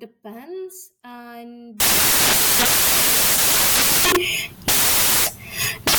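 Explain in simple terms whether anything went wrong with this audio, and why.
At 1.80 s the speech gives way to loud, harsh hiss like white noise, and it lasts to the end of the clip. This is a case of samples built from the wrong bytes: the player assembled each sound value from the wrong pieces, so the tiny, jittery details became the loudest part. That turns ordinary speech into a wall of static.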